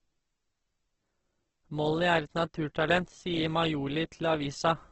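Throughout the speech, the likely cause is Opus compression in its CELT music mode at a bitrate that fits about 12 kbps. Short of bits, it fills bands with folded or noise-like content, so the voice sounds rough and grainy, with nothing above 8.2 kHz.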